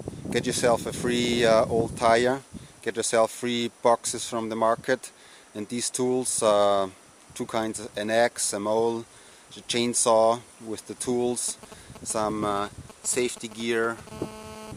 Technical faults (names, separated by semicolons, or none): GSM signalling bursts; GSM phone buzz